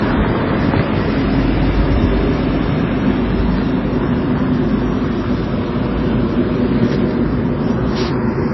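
Throughout, nothing sounds above 5.8 kHz. Smeared, warbly artefacts are layered on each other. The likely cause is transcoding between lossy codecs, fitting low-rate MP3 re-encoded as AAC-LC.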